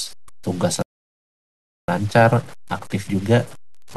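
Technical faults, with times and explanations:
Throughout, low bit depth without dither: grainy distortion tracks the speech about 25 dB down, fitting likely 7-bit truncation; the waveform shows coarse stair-steps and the spectrogram broadband grit.
0.82–1.88 s, playback stall: the speech halts mid-flow into 1.06 s of silence, likely a starved or blocked player; the waveform goes flat and the spectrogram shows a blank gap.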